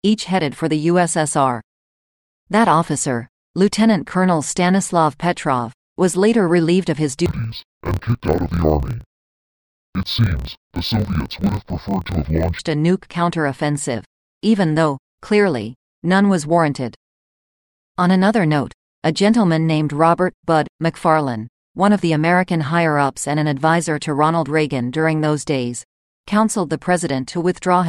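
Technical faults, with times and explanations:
7.26–12.61 s, interleaved audio read as planar: after "later relieved of his", the speech drops an octave, doubled and choppy, until "a nuke counteroffensive even". Each 26.12 ms block's alternating samples are split into halves played at half speed, so pace stays normal, unlike a plain slowdown, with 38.3 Hz chopping.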